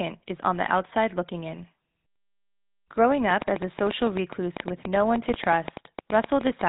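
GSM full-rate codec damage runs through the whole speech clip. The codec rebuilds the voice from a vocal-tract model driven by sparse regular pulses, giving a buzzy, gravelly roughness and nothing above 3.8 kHz, which fits GSM's 13 kbps full-rate mode.

A train of clicks runs from 3.30 s to 6.62 s: about thirty similar pops at an uneven 8.5 per second, peaking about 15 dB above the speech and audible in the pauses too. The likely cause is interference from nearby equipment or a faulty connection or power supply.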